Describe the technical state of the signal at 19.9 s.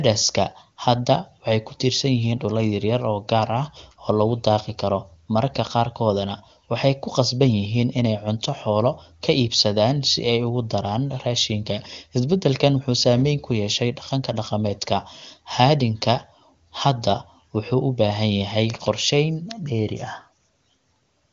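At 19.9 s the speech is intact, carried cleanly by the AMR wideband (HD Voice) codec at 23.85 kbit/s, which leaves at most faint damage and simply stops the band at about 7.4 kHz.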